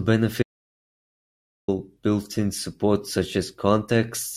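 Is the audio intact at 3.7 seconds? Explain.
Yes, at 3.7 seconds the speech plays through intact, with no dropout, click, distortion or other fault.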